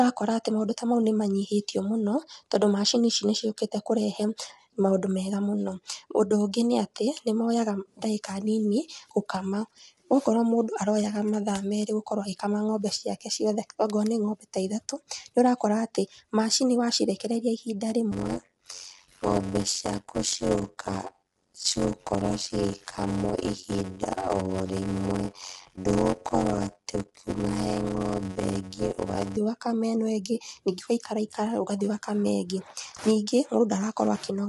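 Throughout, the speech sounds rough and grainy, with noise between the harmonics. Nothing is heard above 11.6 kHz. The damage is plainly audible. Low-delay AAC compression at a low bitrate is the likely cause. Its short frames resolve pitch harmonics poorly.

From 18.11 to 29.37 s comes a block size mismatch (padded). One stage delivers short blocks and the next fills each with zeros. A 91.9 Hz buzz results. The speech slows to 0.533 times normal speed at about normal pitch. This fits 256-sample blocks.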